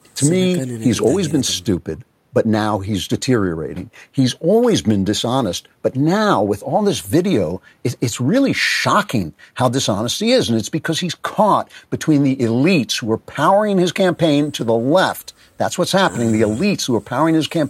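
A recording of speech with no technical faults to report in the signal.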